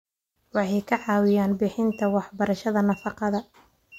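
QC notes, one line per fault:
No faults found.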